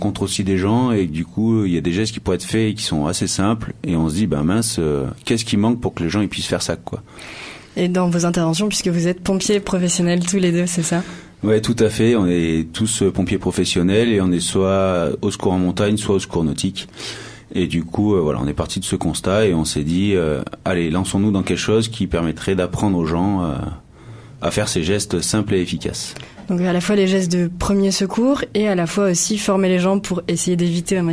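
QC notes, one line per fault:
Nothing stood out on listening.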